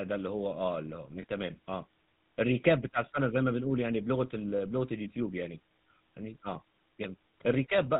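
From start to finish the speech carries the buzzy, gravelly grain of the GSM full-rate codec, with the damage plainly audible. The coder keeps only a coarse vocal-tract shape and a pulse excitation thinned to every third sample, and nothing above 4 kHz survives. The result sounds like the roughly 13 kbps full-rate coder. Unlike a simple band-limited telephone channel, it adds a rasping texture on top of the lost treble.

At 1.22 to 1.24 s there are lost GSM frames. The decoder holds the last good frame and repeats it, giving a short metallic ring instead of a clean dropout. The gap's length fits a single 20 ms frame. That is too brief to fade to silence, and it rings rather than clicks, which distinguishes it from a plain packet gap or an edit.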